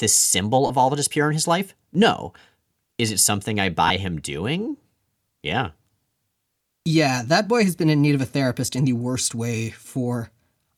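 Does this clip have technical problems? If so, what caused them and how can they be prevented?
Yes. Brief noisy smears replace the speech at 0.66–0.70 s just before "all that is pure", at 3.87–3.90 s between "is it something I" and "him doing", and at 8.67 s between "in need of a" and "in the worst way". These are lost LE Audio frames: the LC3 decoder filled each 30, 22.5 and 7.5 ms gap by repeating the last spectrum with random signs, consistent with runs of 7.5 ms frames dropping out. A stronger Bluetooth link with less interference and a shorter distance, or more retransmission headroom, would prevent this.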